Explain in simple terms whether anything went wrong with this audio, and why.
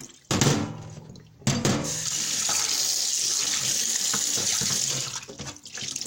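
Nothing went wrong with this recording of sounds: it holds together from beginning to end without any technical problem a listener could point to.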